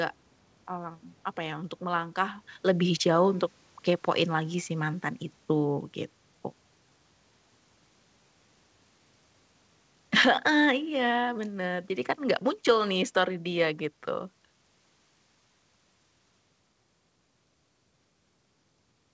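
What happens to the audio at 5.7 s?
At 5.7 s the sound is near the end of an automatic gain falling event that runs from about 1.83 s to 5.93 s, starting just after "mmm apa ya untuk". The gain control judged the input too loud, or its background noise too strong for its gain, and reduced its gain step by step, by about 4 dB in total. The speech sinks over those four seconds, with the background noise dropping along with it, so the whole level is pulled down together.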